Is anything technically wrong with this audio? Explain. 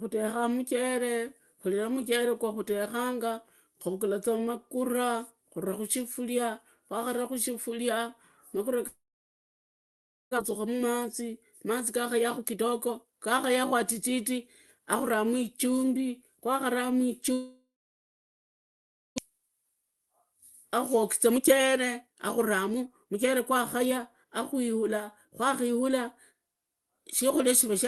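Yes. From 8.87 to 10.39 s and from 17.33 to 19.20 s there are long network dropouts, likely caused by delayed packets. A short buzzy tail fades into about 1.4 to 1.5 s of silence. Each time, roughly a second of speech never returns.

A jitter buffer speed-up follows each gap, at 10.49–11.71, 12.14–14.39, 14.79–15.19, 19.29–20.25 and 20.82–25.91 s. The receiver trims pitch-period slices to shed excess delay. Speech runs 6 to 15% faster at unchanged pitch, sounding hurried.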